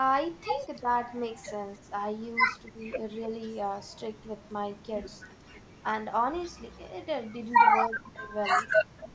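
At 0.8 s and 2.71 to 2.88 s the speech dips sharply, by roughly 20 and 15 dB, which points to speech suppressed in double talk: the echo canceller likely could not separate the near talker from loudspeaker echo and attenuated both. At 7.82 s an echo leak appears, a copy of the speech delayed 272 ms at about 10 dB below it, likely residual loudspeaker pickup the canceller failed to remove. From 7.88 to 8.32 s the speech is cut almost completely, by roughly 35 dB. A fainter echo, about 25 dB down, returns from 8.74 to 9.04 s, followed by a brief dip of roughly 20 dB at 9.02 s.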